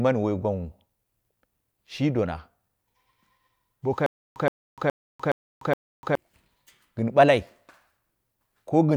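Stutter with silent gaps, 4.06 to 6.15 s: a 121 ms speech fragment repeats five times, each followed by 297 ms of digital silence, an even 418 ms cycle. Playback likely stalled, replaying its last fragment at each retry, and the speech meant for that span is lost.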